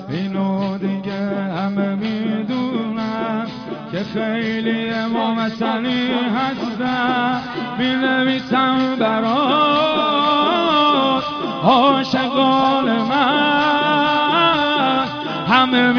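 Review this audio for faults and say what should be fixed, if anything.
No faults; nothing to fix.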